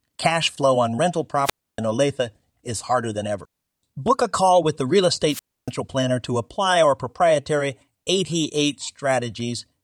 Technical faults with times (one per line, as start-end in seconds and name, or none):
1.43-1.80 wireless microphone squelch dropout
5.28-5.71 wireless microphone squelch dropout